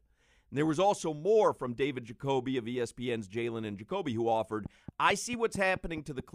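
Speech clip with a train of clicks from 4.66 to 6.21 s, right after "who offered": about seven regular ticks at 4.55 per second, peaking roughly 5 dB above the speech, likely interference or a faulty connection or power supply.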